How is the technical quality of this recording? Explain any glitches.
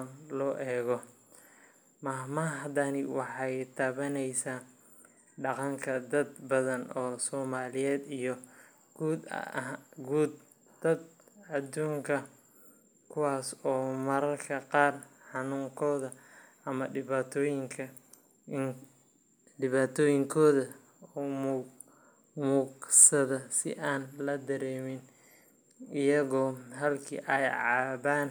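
No technical faults are audible anywhere in the recording, so there are no glitches to explain.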